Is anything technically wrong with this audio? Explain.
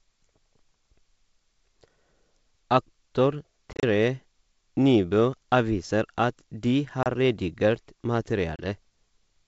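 Yes. Packet loss on an ADPCM call occurs three times: from 3.73 to 3.84 s (about 80 ms missing, broken up over 100 ms in holes of up to 30 ms), at 7.03 to 7.07 s just after "avviser at de", and at 8.56 to 8.63 s (30 ms each). Lost packets become hard-edged silence, and the decoder's adaptive predictor and step size drift from the sender's, so speech resumes slightly distorted before resettling. The wideband G.722 sound itself stays clear up to 7 kHz.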